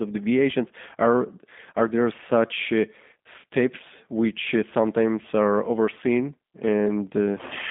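Throughout the speech the sound is narrow, muffled and plainly rough and synthetic, with nothing above about 3.7 kHz and thin lows below 200 Hz. This is G.729 codec damage: frame-by-frame rebuilding from a vocal tract model and sparse pulses, consistent with G.729A at 8 kbit/s.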